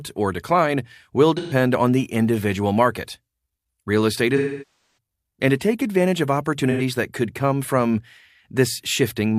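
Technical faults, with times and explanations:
1.37–1.53 s, 4.36–4.91 s, 6.71–6.81 s: AAC frame loss with concealment. The decoder fills missing frames from the last good spectrum, so the short gaps after "or decline will" and before "that could come from" sound smeared and phasey, while the long one before "and to take advantage" decays toward silence and fades back.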